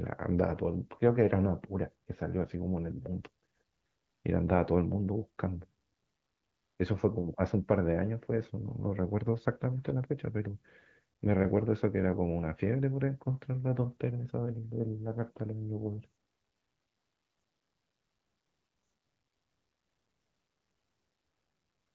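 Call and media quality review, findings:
No findings for call and media quality review: speech on the AMR-WB path at 12.65 kbit/s, no faults heard.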